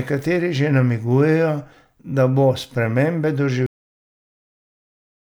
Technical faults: cut-off end

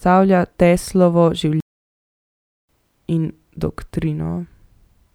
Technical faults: playback stall

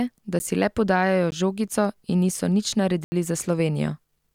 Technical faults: block of digital silence

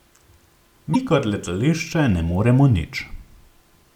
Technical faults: damaged data in a compressed stream

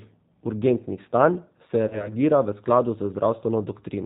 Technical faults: G.729 codec; VoIP packet loss concealed by the speech codec

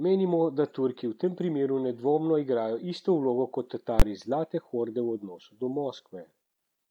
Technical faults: invalid numbers at full scale

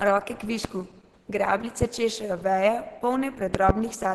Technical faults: Opus compression; loud pop

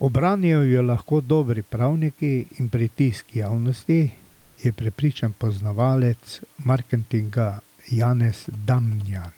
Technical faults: comfort noise in place of the background; GSM signalling bursts

